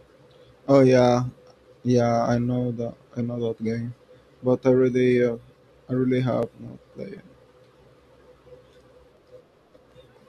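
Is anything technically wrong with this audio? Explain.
Yes. From 6.43 s to 10.17 s, just after "really uh I really", periodic USB or driver dropouts occur every 0.25 s. A recurring stall on the bus or driver skips well under a millisecond of audio each time, producing about fifteen evenly spaced ticks in the speech.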